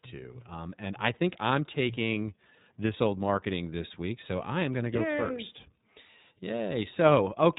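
Speech coded with the iLBC codec throughout: nothing above 3.8 kHz, plus a rough, synthetic grain no plain low-pass would add, fitting 30 ms frames.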